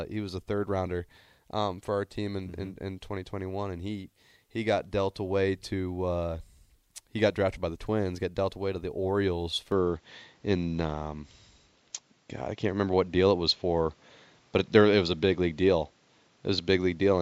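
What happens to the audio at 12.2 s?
From 9.72 s to the end, likely an input switched to a poorer device: narrower-band, duller speech, a modest level step, faint hiss; spectrograms show nothing above 7.6 kHz.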